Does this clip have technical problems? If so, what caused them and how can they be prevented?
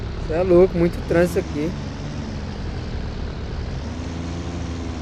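No, this clip doesn't have technical problems, so there is nothing to prevent.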